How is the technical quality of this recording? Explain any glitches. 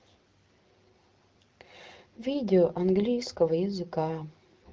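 No glitches to speak of here; the speech comes across as an ordinary HD Voice wideband call at 12.65 kbit/s, with nothing that stands out as a technical problem.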